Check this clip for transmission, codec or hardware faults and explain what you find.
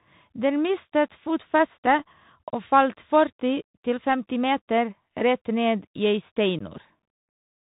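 Two faults are present: the whole clip has passed through a Bluetooth CVSD headset codec, and there is one brief unconcealed Bluetooth headset packet loss near the end.

The CVSD coding runs throughout the speech. The codec sends one bit per sample to step the level up or down, which fits a 64 kbps link. The audible damage is clear. On a spectrogram, nothing appears above 4 kHz. Sibilants sound scratchy where loud high content outruns the adaptive step, and a granular hiss lies under the speech.

The unconcealed Bluetooth headset packet loss falls between 6.59 and 6.61 s. About 15 ms of audio, roughly a couple of packets, never arrived, and nothing filled the gap. It is heard as a short, hard-edged hole. The waveform shows an abrupt gap, and the spectrogram shows a thin vertical break.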